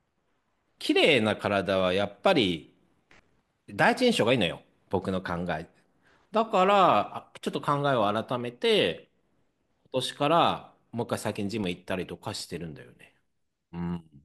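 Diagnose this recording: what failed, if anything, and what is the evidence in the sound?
CD scratch ticks, a disc read failure at playback: seven ticks between 2.52 and 3.28 s, then eight between 11.51 and 12.41 s, the longest about 2 ms and 4 ms respectively, roughly nine per second. Once per revolution, a surface blemish exceeded error correction, and the player interpolated or muted the lost samples.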